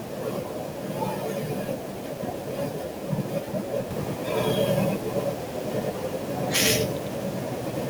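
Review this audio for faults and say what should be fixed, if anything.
From 3.91 s to the end, the speech has a doubled audio track. A second full-band copy runs about a tenth of a second behind the first, at roughly the same loudness. It starts abruptly, with no decay or room colour. Each syllable gets a hard slap right after it. The likely cause is the same signal arriving twice, once through a slower capture path or from an edit that left two offset copies. Route each source through a single path and check edits for stacked duplicate regions.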